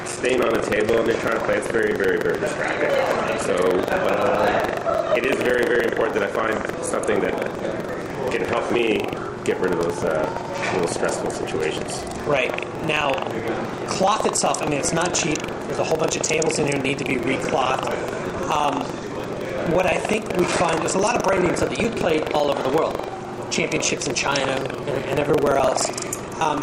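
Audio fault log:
throughout, buffer tearing: a steady robotic rattle at 23.4 Hz, which fits a 2048-sample buffer. Writing and playback positions cross inside every period, so a small slice of each buffer replays audio from roughly 150 ms earlier, butted against hard joins.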